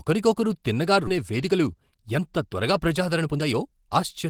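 At 1.07 to 1.09 s a skip ahead occurs. Roughly 0.7 s of speech was dropped while later audio waited. The two sides join directly, with no gap.

From 1.17 to 4.27 s a jitter buffer speed-up follows. Short pitch-period pieces, around 0.3 s in total, are cut repeatedly. Speech runs at 111% speed, sounding hurried at unchanged pitch.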